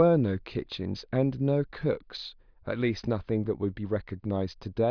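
A speech recording, and nothing is technically wrong with it.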